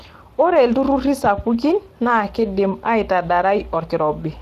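From start to end the speech has a grainy, hoarse roughness, and nothing reaches above 15.3 kHz. This is Speex codec damage: the CELP coder has too few bits to rebuild the excitation cleanly, which fits a bitrate around 22 kbps.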